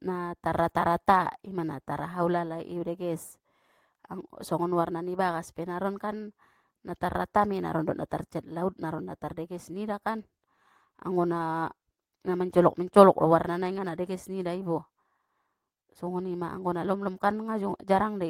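No technical faults can be heard anywhere in the speech. Nothing in the audio calls for a timestamp or an explanation of what went wrong.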